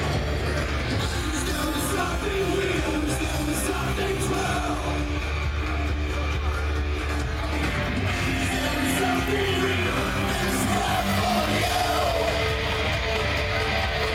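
No technical faults can be heard anywhere.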